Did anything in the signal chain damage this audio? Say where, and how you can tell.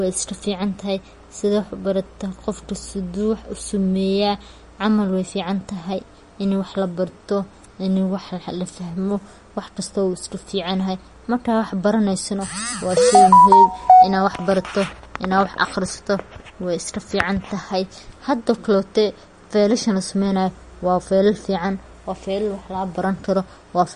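Yes, at the codec stage, throughout the speech. Nothing is present above 10.6 kHz, and the s sounds carry a watery, chirpy swirl. The likely cause is MP3 compression starved of bits, which fits about 40 kbps. The encoder cut the treble and dropped weak frequency lines.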